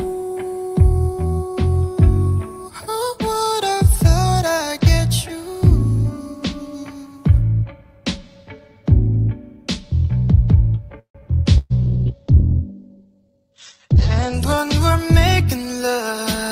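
A call audio freeze runs from 10.99 to 11.20 s. The last sound is stretched into a fading tail that drops to silence for about 100 ms, then the audio picks up where it stopped, now about 151 ms later. This is likely packets stalling in transit until the jitter buffer ran dry.

A burst of packet loss follows at 11.58 to 11.73 s. About 120 ms of packets never arrived in time, so the receiver stretches the preceding sound into a dimming buzz or hiss, and the audio resumes further along with that stretch gone.

A call bitrate drop starts at 11.87 s and lasts until 16.44 s. The encoder falls from 48 to 9 kbps and sits at its lowest for about 2.3 s. The bandwidth narrows from 20 kHz to 8 kHz, so the sound turns muffled and coarse, with a watery roughness.

A jitter buffer speed-up overlaps that from 15.55 to 15.80 s. The buffer had built up more audio than its target, so short pitch-period slices totalling about 40 ms are cut out. 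The sound runs at 112% speed with unchanged pitch and feels briefly hurried.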